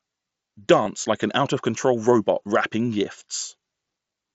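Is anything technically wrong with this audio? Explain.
Yes. At 0.85 s, just before "like an", there is one brief concealed Bluetooth headset packet loss. About 7.5 ms of audio, consistent with a single lost headset frame, was replaced by repeating the best-matching recent stretch of waveform. It is nearly inaudible. On a waveform it shows as a short, slightly too-regular repeated cycle, and a spectrogram shows a thin vertical seam. The mSBC headset codec's roughly 8 kHz bandwidth ceiling is also visible on the spectrogram.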